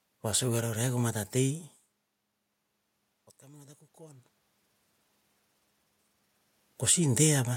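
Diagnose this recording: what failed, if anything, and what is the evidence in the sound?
Automatic gain rising, 3.39 to 4.34 s, in call processing: the level at the microphone fell by about 24 dB, and the gain control slowly added about 3 dB. The speech and the room noise swell together, which separates this from the talker's own movements near 1.5 s and 4.0 s.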